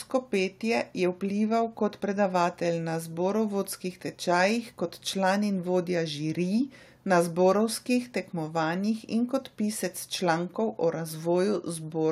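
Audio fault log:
No faults were found in this speech recording.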